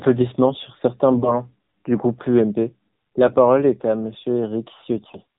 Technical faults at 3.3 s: AMR narrowband mobile codec; AMR bit errors

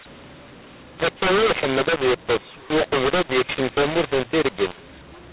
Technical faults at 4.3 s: mu-law and A-law mixed up

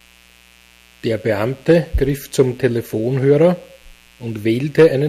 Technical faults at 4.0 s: mains buzz

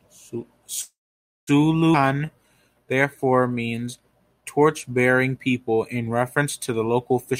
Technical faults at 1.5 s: call audio freeze

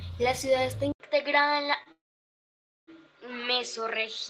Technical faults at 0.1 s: mains hum

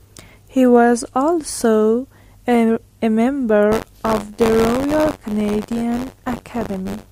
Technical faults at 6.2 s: buffer tearing

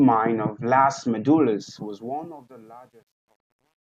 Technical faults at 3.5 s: truncation distortion on a fade

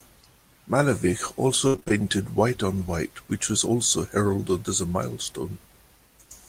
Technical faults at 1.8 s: repeated packet loss (robotic sound)

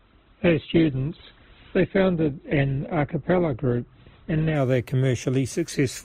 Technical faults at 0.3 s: adaptive stream starting at a low bitrate

